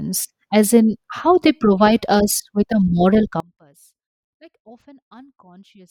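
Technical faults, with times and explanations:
3.40 s to the end, audio dropout to a faint residue: right after "us with a moral" the speech drops away abruptly and never returns, leaving only a faint trace of sound around 30 dB below the normal level for the last 2.5 s. The cut is sudden, not a pause or fade. The likely cause is the wanted signal being lost upstream while the path after the break stayed live, passing on only leakage.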